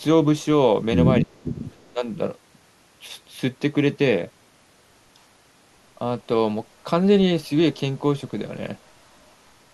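At 1.21 to 1.31 s the speech dips by about 20 dB for roughly a tenth of a second, a short hole in the waveform envelope and a brief fade across the spectrogram. This is speech suppressed in double talk, likely from an echo canceller ducking the talker while both ends spoke.

An echo leak follows at 1.35 to 1.44 s, a faint copy about 35 dB below the speech. It returns stronger at 1.63 to 1.92 s, about 25 dB down. Both copies trail the original by 269 ms and show as pale, delayed repeats of the speech's harmonic striations. The likely cause is a loudspeaker's echo slipping past the far end's canceller.

At 1.93 to 2.06 s the speech is suppressed in double talk again, this time by about 10 dB over roughly 150 ms. It shows as a shallower notch in the envelope, likely from the canceller ducking the talker while the echo was still present.

Faint echo leaks recur at 8.86 to 8.92 s and 9.13 to 9.32 s, each about 40 dB below the speech and again 269 ms late. 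They are barely visible as ghostly traces low in level on the spectrogram, likely from residual loudspeaker echo.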